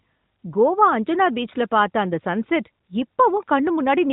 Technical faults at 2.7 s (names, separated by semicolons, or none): none